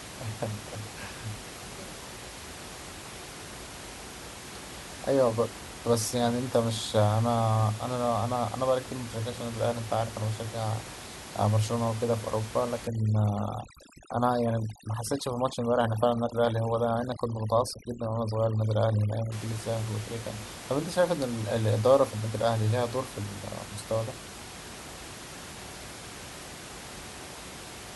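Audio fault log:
12.87–19.32 s, overdone noise removal: aggressive noise reduction clamps bands near the room noise, so the background drops and breaks up into twinkling specks.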